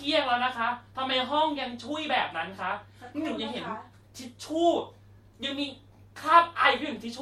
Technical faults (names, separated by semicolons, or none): none